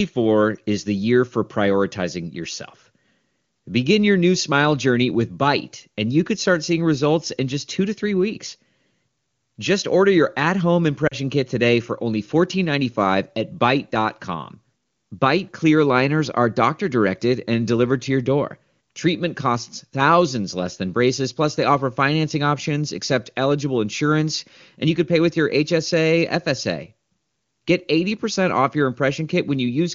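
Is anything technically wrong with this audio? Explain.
Yes. At 11.07 to 11.15 s, between "order your at home" and "kit today for only", the speech briefly fades toward near silence. These are lost AMR speech frames: about 40 ms of data, which fits two frames, failed decoding. The decoder patched the gap by repeating earlier pitch and vocal tract settings at reduced gain.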